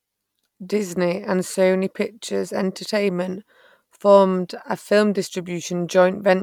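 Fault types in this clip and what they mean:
Damaged data in a compressed stream: Some bytes in the encoded speech are corrupt. The decoder cannot read those frames properly. It loses its place and hunts for the next valid frame header. Each hit is a short chirp, squawk, click or hole in the speech. The first runs from about 1.53 to 1.55 s. The second comes at 5.62 s, just after "formed a film". Both are very brief glitches.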